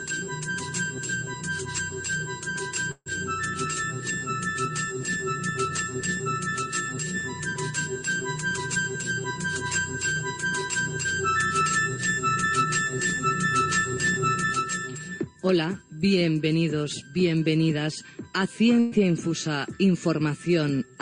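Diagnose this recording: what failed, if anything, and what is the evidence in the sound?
Burst of packet loss, at 2.91 to 3.08 s and again at 18.80 to 18.94 s, is a network-stage fault. In the first event about 140 ms of audio goes missing; the receiver's concealment stretches the last sound it had for roughly 143 ms, turning it down as it goes, and it decays into about 30 ms of silence before playback resumes. The second burst drops about 120 ms, concealed for 119 ms with no silent tail.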